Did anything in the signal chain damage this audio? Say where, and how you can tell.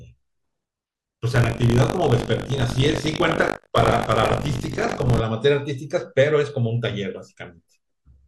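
Yes. From 1.34 to 5.22 s the speech carries a robotic 50 Hz rattle, heard only while signal is present. That is buffer tearing in the driver's ring buffer. Writer and reader have slipped, so each period, which fits 20 ms, splices in a short slice roughly 70 ms old, hard-joined on both sides.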